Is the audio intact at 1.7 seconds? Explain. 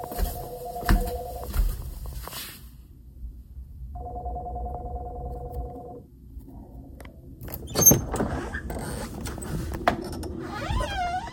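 No. At 1.7 seconds the audio is caught in a run of clock slip clicks that lasts from about 0.13 s to 11.23 s. Faint ticks recur at a steady spacing of roughly 0.15 s. That regular spacing likely comes from two devices running on unsynchronised clocks about 150 ppm apart, so a single sample is dropped or repeated each time the drift adds up to one sample. Unlike buffer underrun dropouts, these ticks leave no audible gaps and keep a fixed rhythm. They disappear wherever the sound falls silent.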